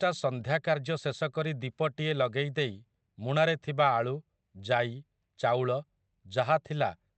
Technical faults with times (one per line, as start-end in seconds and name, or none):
none